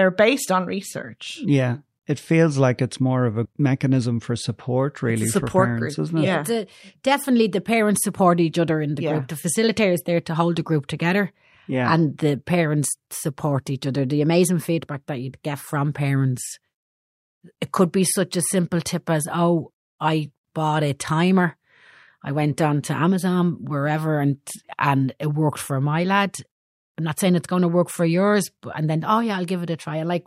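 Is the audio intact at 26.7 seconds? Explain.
Yes, the speech at 26.7 seconds is intact, with no dropout, click, distortion or other fault at that point.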